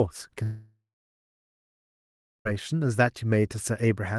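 From 0.43 s to 2.52 s the speech breaks off in what is likely a long network dropout, with about 2.0 s of audio never arriving. The receiver stretches the last sound into a fading buzz for roughly 0.4 s, then holds near-silence for about 1.65 s. Speech resumes at 2.52 s without the lost portion. Throughout, the call codec adds its coding noise and the high end stops around 12 kHz.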